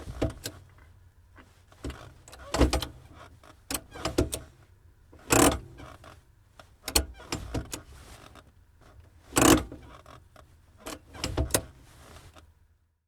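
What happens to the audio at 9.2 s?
Nothing goes wrong at 9.2 s; the audio is intact at that moment.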